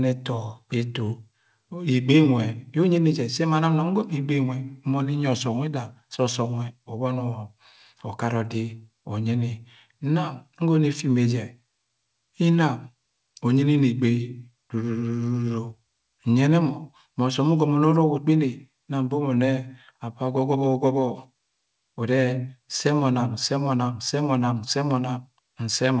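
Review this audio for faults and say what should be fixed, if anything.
No faults found; nothing needs fixing.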